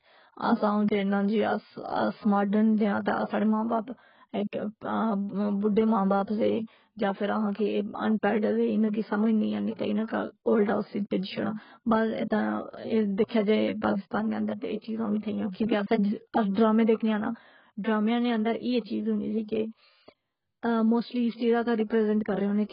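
The whole clip sounds dull and smeared. Nothing is heard above 5.2 kHz, so sibilants lose their edge and turn fizzy. Sustained sounds carry a warbling texture. This is likely heavy AAC compression, with the damage pointing to AAC-LC at a very low bitrate, around 12 kbps. The encoder lowers its cut-off and quantises coarsely against a hearing model. That leaves holes in the spectrum and fills some bands with substitute noise.

Pre-echo appears three times. From 3.68 to 3.70 s, a short hiss of 25 ms leads into "باپ ایک". From 13.26 to 13.31 s, a 44 ms smear precedes "جائے پاکستان نے اندرتہ". From 16.51 to 16.57 s, a 56 ms hiss comes before "ڈرامے دیکھنے آں ناں". Each time a sharp attack falls late in a transform block. Noise sized for the loud part spreads back into the quiet moment before it. The onset sounds soft and smeared.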